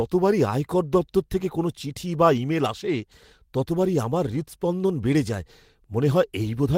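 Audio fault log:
No audible faults detected.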